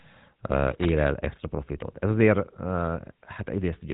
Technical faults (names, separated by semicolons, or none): GSM full-rate codec